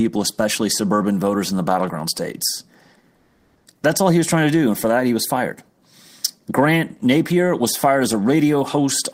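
Right after "in the battleground states", from 3.15 to 3.65 s, comfort noise takes the place of the background for about half a second. The real room tone, already faint at about 43 dB below the loudest speech, gives way to a steady, featureless hiss about 2 dB quieter. The likely cause is discontinuous transmission such as Opus DTX, with the receiver synthesising filler during the pause. Unlike a dropout or a noise gate, the background never goes silent. It is smoothed out and slightly dimmed.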